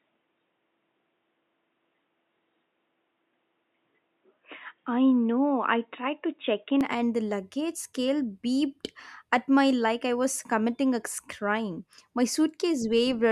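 Speech, whose first 6.81 seconds sound dull and boxy, with nothing above about 3.8 kHz, before the sound opens up to full bandwidth just before "and the luggage scale". This is most likely an input switched to a poorer device, a narrowband microphone or headset call profile, with recording then moving to a better input. Unlike a codec dropping its bandwidth, the change is a single clean step with no silence and no level jump, and it carries its own faint background noise, roughly 55 dB down.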